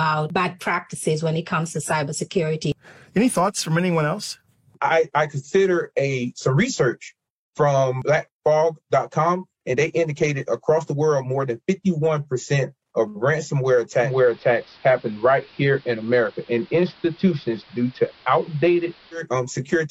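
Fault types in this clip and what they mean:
Digital radio blending to analogue: from 14.01 s to 19.25 s the sound turns dull, with faint hiss and a level shift of about 1 dB. The receiver lost its digital stream and cross-faded over 144 ms to the station's AM broadcast.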